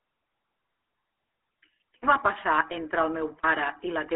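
From start to finish, the speech carries GSM full-rate codec damage. The vocal tract is modelled and driven by coarse, regularly spaced pulses, which fits a 13 kbps phone codec. The result is plainly buzzy and gravelly. Nothing survives above 3.8 kHz.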